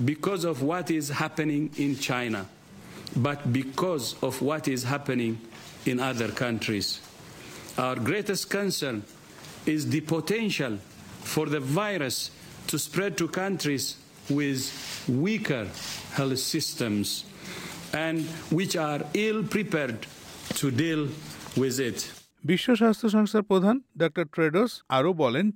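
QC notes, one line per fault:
throughout, imaging from linear upsampling: the top of the band sounds dulled, while a faint mirrored copy of the spectrum sits between 11.025 kHz and 22.05 kHz at roughly 25 dB below the signal, which points to a rate change from 22 kHz to 44.1 kHz done by joining samples with straight lines. That weak interpolation filter softens the original highs and leaves these images as a light metallic shimmer on bright, hissy high-frequency content.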